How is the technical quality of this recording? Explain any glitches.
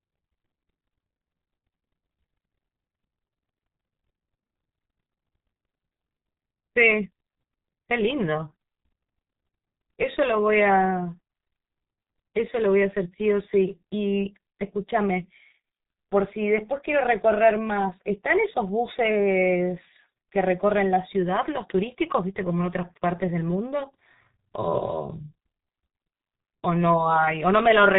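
Quality is poor: a heavy G.723.1 codec sound runs throughout. Nothing above 3.8 kHz survives, and the slow, coarse voice model leaves speech muffled, hoarse and smeared, consistent with roughly 6 kbit/s coding. Plain filtering would dull the speech but keep it clean.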